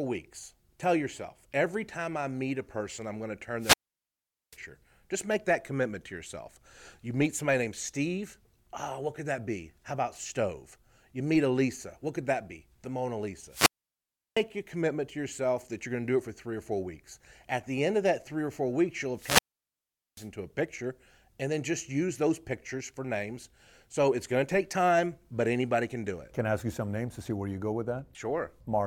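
The FM radio link of a wireless microphone fades until the receiver's squelch mutes the output, a wireless microphone squelch dropout. Hiss rises, then near-silence lasts about 0.7 to 0.8 s. This happens at 3.58 to 4.58 s after "person I'm going to", at 13.49 to 14.43 s before "your commitment to yourself", and at 19.15 to 20.29 s between "or four weeks you'll" and "a picture and then".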